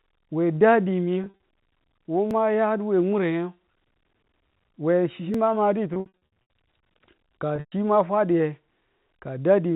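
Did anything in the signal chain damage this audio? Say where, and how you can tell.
Yes. The network stage dropped packets at 1.24 to 1.37 s, 5.94 to 6.13 s (right after "we chi ma") and 7.56 to 7.72 s. Packet loss with pitch repetition shows as a held, buzzy tone where the receiver loops the last pitch period. The 120 ms run at 7.6 s fades to silence before the sound returns.

There are also two small jumps in the audio at 2.31 s and at 5.34 s (just after "we chi"), each skipping roughly 10 ms with no gap of silence. That's likely a dropped buffer (overrun) at the driver level, where samples were overwritten before being read and the two sides were spliced together. The G.711 telephone band-limiting sits underneath all of this and isn't the source of either fault.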